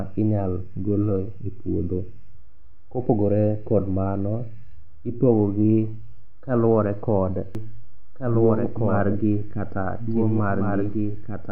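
A second copy of the signal is likely entering the mix through a slower capture path, producing a doubled audio track in this speech recording. From 7.55 s, right after "kaluwore kod", a full-band duplicate switches on abruptly and runs to the end, trailing the original by roughly one and a half seconds at around 5 dB quieter. Lacking any decay or room colour, it sounds like a clean overlapping repeat rather than an echo.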